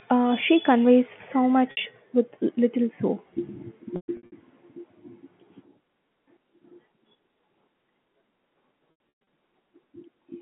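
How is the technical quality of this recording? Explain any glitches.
The recording has three dropouts from packet loss with pitch repetition, heard over a narrow telephone band. At 1.71 to 1.77 s, about 60 ms drops out. The receiver repeats the last pitch period, so the sound briefly holds with a buzzy tone. From 3.96 to 4.32 s, losses scatter over about 360 ms, with runs up to 120 ms. Repeated pitch fades toward silence before the sound returns. From 8.91 to 9.09 s, a similar scattered loss produces the same fading buzz.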